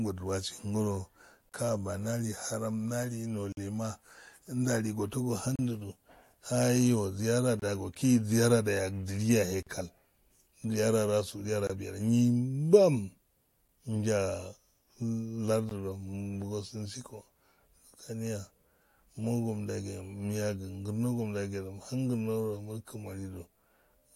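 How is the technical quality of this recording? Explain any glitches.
The recording has one recurring fault: eight short silent holes, about 2 s apart, from gaps between stream segments.

They fall at 1.49–1.52, 3.52–3.57, 5.56–5.59, 7.60–7.62, 9.63–9.67, 11.67–11.70, 13.68 and 15.69–15.71 s. Each is a sharp-edged silence of 8 to 49 ms, where a pair of 2 s segments don't quite meet and the player pads the join with silence. Unlike a dropout, the speech resumes exactly where it stopped, so nothing is missing, only delayed. The steady 2 s spacing also points to segment boundaries rather than random packet loss.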